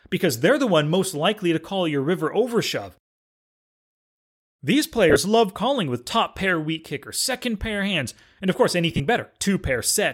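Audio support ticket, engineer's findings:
Brief noisy smears breaking up the speech at 5.10–5.16 s and 8.91–9.00 s, with scattered gaps and runs up to about 30 ms. Cause: lost LE Audio frames. The LC3 decoder conceals each gap by replaying the last spectrum with randomised signs and fading it, and the gaps fit 7.5 ms frames.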